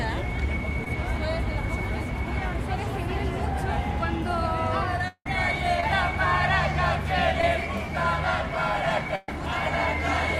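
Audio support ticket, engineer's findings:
Short concealed packet loss at 0.84–0.87 s, 5.80–5.83 s and 7.41–7.43 s. Jitter buffer or network: about 10 ms of packets missed decode deadline each time. Decoder concealment extended the preceding sound across the hole, 10 to 20 ms of filled audio, then crossfaded back. Audible as a brief smear or wobble; a short transient can drop out.

Long network dropout, 5.08–5.26 s. Likely cause: stream interruption upstream, roughly 180 ms of audio never delivered. Receiver extrapolated the last sound as a decaying buzz or hiss, then fell to near silence for about 60 ms before real audio resumed further along. Material inside the gap is lost, not delayed.

Burst of packet loss, 9.15–9.29 s. Consecutive packets lost or late, about 120 ms total. Concealment held the last sound and attenuated it across the gap, giving a sustained buzz or fading hiss with no silent stretch. 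Playback resumes later in the timeline; the intervening audio is missing.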